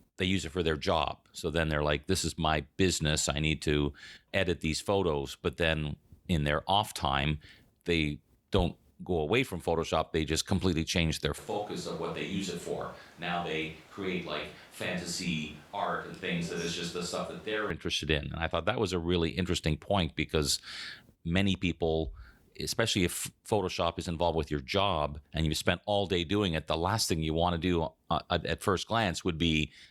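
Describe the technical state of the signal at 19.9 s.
At 19.9 s the speech signal is intact, with no technical fault audible at that moment.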